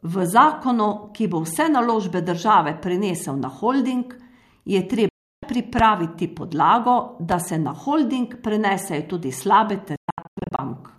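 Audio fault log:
5.09–5.43 s, digital broadcast dropout: The speech mutes for about 0.34 s. A 3 ms fade takes it to silence, then it returns. The receiver lost a run of frames and muted. That audio is gone.
5.79–5.82 s and 7.32–7.34 s, loud pop: A single sharp pop sits on each, about 15 dB and about 10 dB above the speech. The speech continues underneath. A sudden voltage step, likely from a switch, plug or static, was added to the signal.
9.96–10.59 s, digital broadcast dropout: Several short silent holes are scattered over about 0.62 s, totalling roughly 0.41 s. The longest lasts 120 ms. Each starts with a 3 ms fade. Frames failed intermittently, and the receiver muted each time.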